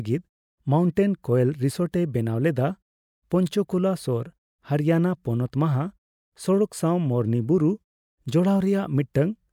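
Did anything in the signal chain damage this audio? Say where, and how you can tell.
No damage found anywhere.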